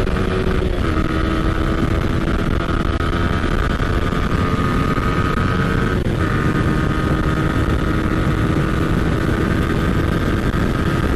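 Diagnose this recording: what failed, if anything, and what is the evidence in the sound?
Nothing failed at any stage of the chain, and the sound carries no evidence of a fault.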